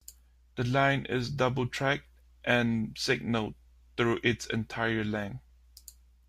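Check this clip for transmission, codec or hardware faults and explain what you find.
Nothing in the recording stood out on listening as a transmission, codec or hardware problem.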